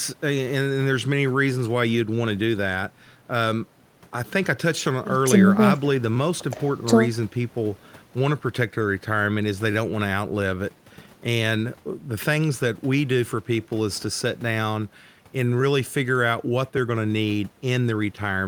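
No technical faults can be heard anywhere in the speech recording. There is no moment that needs a time marker or a closer look.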